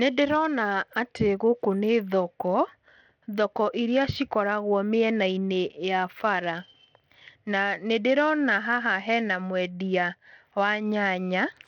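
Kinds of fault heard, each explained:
Bluetooth SBC compression: the speech likely passed through SBC at a low bitrate, fitting roughly 80 kbps. The top end keeps flickering out, with gritty grain riding on it.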